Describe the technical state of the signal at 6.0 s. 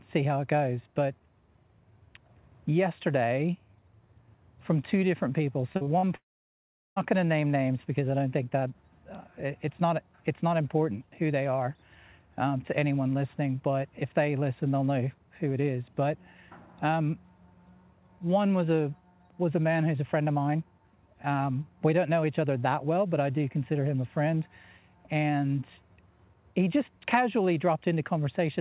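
At 6.0 s the signal is inside a stretch of repeated packet loss (robotic sound) from 5.72 to 6.05 s. Four short gaps, the longest 43 ms, are patched by stretching the preceding sound, so nearly half that span is concealed and it comes out choppy. Unlike a single dropout, the holes recur in quick succession. Throughout, nothing is heard above 4 kHz, which fits a narrowband call codec such as G.711.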